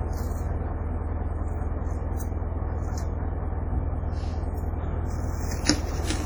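All the way through, the sound has a ringing, washy smear with hiss breathing along with it, heavy damage that's likely WMA compression at something like 32 kbps.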